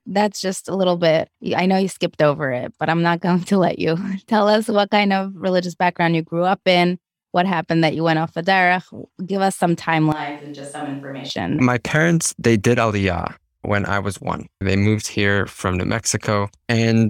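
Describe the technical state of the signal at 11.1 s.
At 11.1 s the speech is in a switch to a distant microphone, running from 10.12 to 11.30 s. The close microphone's feed has likely dropped out in favour of a farther pickup, so the voice sounds hollow, roomy and thinner in the bass. It is about 10 dB quieter, with a room-noise floor around 35 dB below it. On the waveform the envelope shrinks abruptly at the start and grows back abruptly at the end. On a spectrogram the low end weakens and smeared reverberant tails fill the gaps.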